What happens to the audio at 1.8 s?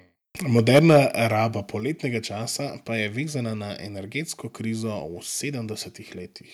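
At 1.8 s the speech and the background both drop abruptly by about 4 dB in a single step and stay at the lower level. This is a microphone volume stepped down: the call software likely judged the input too hot and cut the device's input volume at once.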